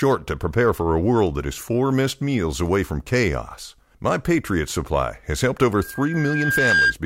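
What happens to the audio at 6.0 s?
At 6.0 s you're in the middle of a loudspeaker feedback squeal, running from about 5.80 to 6.95 s. The mic is picking up its own speaker, so a 1.6 kHz tone feeds on itself, swelling over roughly a second until it sits a few dB above the speech.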